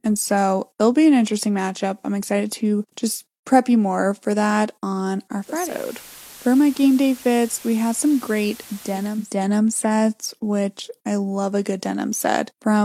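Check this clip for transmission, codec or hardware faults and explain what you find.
There's one fault here: digital radio blending to analogue, from about 5.33 s, just after "more for that on", until 9.37 s, just before "sets which I love". The receiver dropped its digital stream and cross-faded over roughly half a second to the station's FM signal, then came back. During that stretch, hiss rises to around 20 dB under the speech and the level drops about 2 dB.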